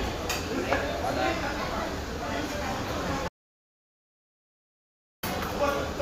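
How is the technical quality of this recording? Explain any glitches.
The recording has one clear glitch: an audio dropout to silence. At 3.28 s the sound cuts off abruptly mid-flow, and nothing at all is heard until it returns just as suddenly at 5.23 s, roughly 1.95 s later. The gap is dead, digital silence with no background or room tone. That points to the input signal being lost, most likely through a disconnected device, a failed link or an accidental mute, while recording continued writing silence. Whatever sounded during that gap is gone.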